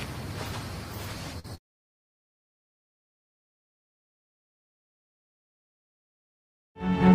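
The audio breaks up with repeated packet loss (robotic sound) from 1.39 to 2.02 s. Across those 0.62 s there are six dropouts, the longest 73 ms. Each hole is papered over by extending the preceding sound, so roughly a third of that span is synthetic fill. The rapid succession of patched gaps gives a choppy texture. About a quarter second of real signal is lost, consistent with a network path dropping or delaying data.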